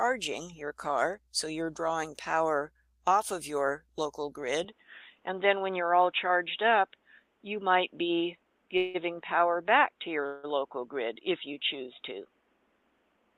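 At 4.65 s the sound abruptly turns dull and boxy through to the end, with nothing above 3.8 kHz, a faint new background noise and no gap or level jump. This likely comes from an input switched to a poorer device. The fresh noise floor sets it apart from plain filtering.

At 8.77 s and 10.26 s, each lasting about 0.17 s, the sound briefly smears into a fading buzz and then resumes exactly where it stopped. These are call audio freezes, likely caused by delayed packets draining the jitter buffer. Unlike dropouts, they contain no silence and lose nothing; the audio is simply pushed later.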